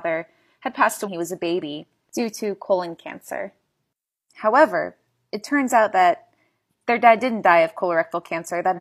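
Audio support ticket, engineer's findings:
Damaged data in a compressed stream: corrupted bytes in the encoded speech, decoder misreads frames and loses sync until the next valid header. Heard as a short chirp, squawk, click or hole, 1.03–1.08 s and 8.73–8.80 s, about 60 ms each.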